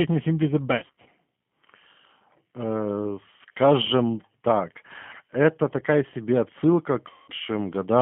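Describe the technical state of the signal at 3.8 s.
At 3.8 s the speech carries G.729 codec damage, present throughout the clip. The sound points to an 8 kbit/s codec rebuilding speech from a vocal-tract filter, pitch predictor and sparse pulses, leaving a plainly audible rough, synthetic quality within a 150 Hz to 3.5 kHz band.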